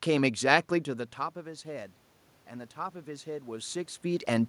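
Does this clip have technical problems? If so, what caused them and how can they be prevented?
Yes: automatic gain rising from 1.44 to 4.44 s, where the input dropped about 15 dB and the AGC slowly pushed gain up about 5 dB, swelling voice and room noise together. Fix the gain manually or slow the AGC.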